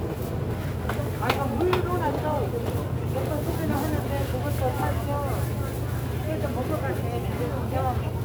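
A recording of sounds carrying sample clock jitter from start to finish. The converter's clock wanders, so each sample lands a little early or late, here by something on the order of several microseconds rms. Where the waveform changes fastest, that timing error turns into an amplitude error roughly 25 dB below the signal. It comes through as a grainy hiss riding on the louder, brighter sounds and disappearing when the audio goes quiet.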